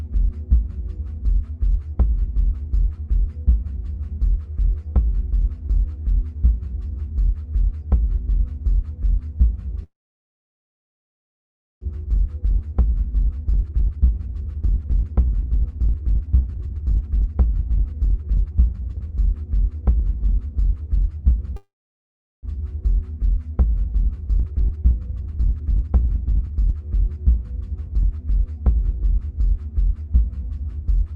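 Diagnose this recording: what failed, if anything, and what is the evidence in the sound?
A call audio freeze at the network and jitter-buffer stage occurs twice, from 9.83 to 11.83 s and from 21.56 to 22.45 s. The last sound trails briefly, then goes silent for about 1.9 s and 0.75 s. It resumes exactly where it stopped, with nothing lost, which separates it from a dropout. The likely cause is delayed packets draining the buffer.

Jitter buffer speed-up follows each stall, from 11.94 to 21.50 s at 121% speed and from 23.63 to 28.36 s at 118%. Short pitch-period slices are cut repeatedly, removing about two seconds and then one second of backlog. The audio sounds hurried, but the pitch holds steady, unlike a resampling or clock error.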